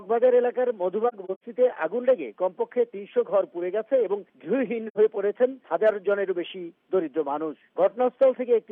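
From 1.08 to 1.43 s, AAC frame loss with muting leaves about 170 ms of silence scattered across roughly 340 ms, the longest gap around a tenth of a second. A shorter hole follows at 4.87–4.98 s. Zeroed spectra fade smoothly through overlapping windows, so these gaps have soft edges.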